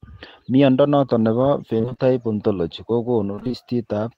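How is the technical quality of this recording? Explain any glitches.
The recording has two brief glitches. Repeated packet loss (robotic sound) occurs at 1.77–2.01 s, just after "noton nebo", and again at 3.35–3.55 s. Several gaps of up to 27 ms are each patched by stretching the preceding sound. About half of each span is filled in this way, which makes the speech choppy and robotic.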